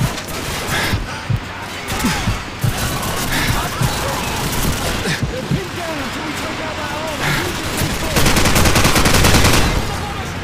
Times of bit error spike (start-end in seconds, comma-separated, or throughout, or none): 1.36